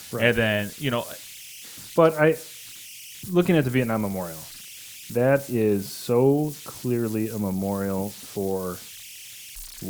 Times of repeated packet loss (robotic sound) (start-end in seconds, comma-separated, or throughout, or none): none